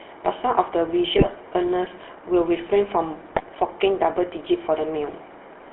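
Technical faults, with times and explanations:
Throughout, GSM full-rate codec: the speech has a buzzy, gravelly roughness from a coder that models the vocal tract and drives it with sparse regular pulses. The band runs only from about 300 Hz to 3.4 kHz, which fits 13 kbps full-rate GSM.
1.18–1.29 s and 3.32–3.42 s, GSM bit errors: each burst of about a tenth of a second breaks into squawks and gargling as corrupted filter, pitch and gain values reach the decoder, warping the spectrum and level; each span fits five 20 ms frames.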